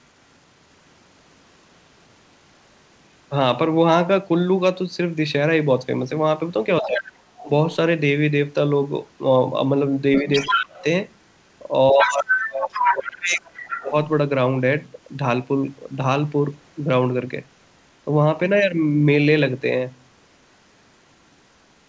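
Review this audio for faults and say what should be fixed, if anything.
Other side's voice leaking through, at 6.81–7.43 s, 10.15–10.84 s and 11.99–13.84 s: a second voice sits under the speech, about 10 dB below it in the first stretch and roughly as loud as the talker in the later two. This is likely loudspeaker playback reaching the microphone and passing the echo canceller only partly removed, so the far end hears itself returned. Preventing it means using a headset, or giving the echo canceller a cleaner reference and more time to converge.

Speech suppressed in double talk, at 6.81–7.51 s, 10.22–10.84 s and 11.91–13.94 s: the talker's level sags whenever the leaked voice overlaps it. The drop reaches about 15 dB in the first stretch and about 25 dB in the later two, over roughly a third of a second, nearly half a second, and close to two seconds in turn. Unable to tell near speech from echo, the canceller's suppressor likely turned everything down together. 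Preventing it means tuning the suppressor to be less aggressive during overlap, or removing the echo at the source so no heavy suppression is needed.

The whole clip is band-limited to 8 kHz, which points to a G.722 call codec at 64 kbps.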